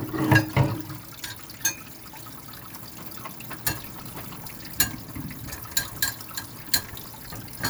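The clip is everyday sound with two bursts of processor overload crackle. The first runs from 3.87 to 4.60 s. The second runs from 6.83 to 7.07 s. The processor could not fill its short audio buffers in time. Deadlines were missed again and again, about 50 times in the first burst and 20 in the second. Each missed buffer was skipped, leaving a tiny hard-edged gap. The buffers were roughly 10 ms long. Together they sound like gritty tearing that stops when the load eases.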